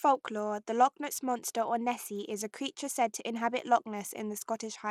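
From start to finish the speech carries plainly audible codec damage, most likely from Bluetooth SBC compression. The upper frequencies thin out and flicker in and out, and a gritty, grainy noise with aliasing rides on the sound. That fits a small bit pool, around 96 kbps. With so few bits, the encoder starves its top sub-bands and only coarsely quantises the rest, since it has no hearing model to decide what to keep.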